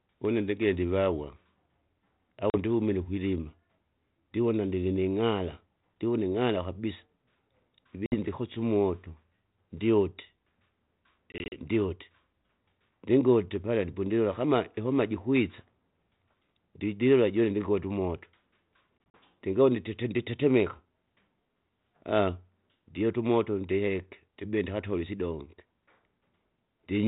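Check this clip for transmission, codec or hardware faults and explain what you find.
One fault recurs: packet loss on an ADPCM call. It strikes at 2.50–2.56 s, before "ndihumine ukwilima", and at 8.06–8.16 s, before "ndikosye umoto". It also hits 11.32–11.66 s, and 18.98–19.18 s before "ndingaune titi nditetemeka". Lost packets leave hard-edged silences of 40 to 100 ms. The later two are broken up into runs of up to 40 ms. Afterwards the decoder's predictor and step size are out of step, so speech returns slightly distorted. It settles within tens of milliseconds.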